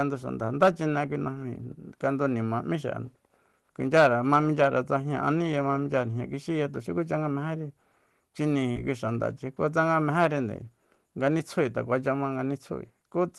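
At 8.71 to 8.76 s, short concealed packet loss: roughly 40 ms of speech was lost and synthesized from preceding sound, giving a brief smear; spectrograms show smoothed, repeated content beneath the call path's roughly 12 kHz ceiling.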